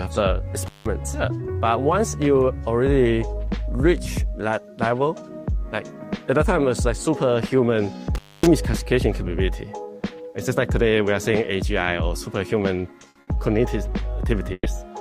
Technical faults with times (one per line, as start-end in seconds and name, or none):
0.66-0.86 intermittent contact
8.15-8.46 intermittent contact
13.09-13.30 burst of packet loss
14.53-14.68 burst of packet loss